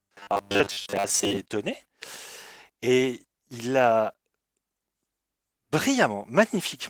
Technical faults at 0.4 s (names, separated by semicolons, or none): robotic sound from repeated short buffers